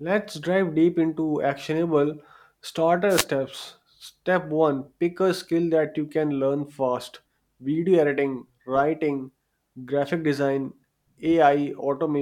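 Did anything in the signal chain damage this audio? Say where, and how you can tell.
Yes: a wireless microphone noise hit from 3.09 to 3.25 s, a brief burst of static as the FM radio link faded and receiver noise rose.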